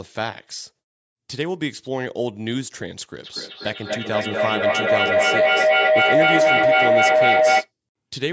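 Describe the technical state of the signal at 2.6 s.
At 2.6 s the speech signal is intact, with no dropout, distortion or other fault, only the ordinary call microphone processing trimming the lowest bass.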